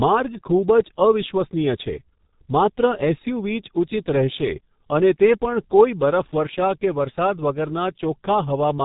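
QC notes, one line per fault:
Throughout, G.723.1 codec: the speech sounds heavily muffled and hoarse, with blurred consonants, pointing to a low-rate coder near 6 kbit/s working in coarse 30 ms frames. On a spectrogram, energy stops sharply at 3.8 kHz, and the harmonics look smeared.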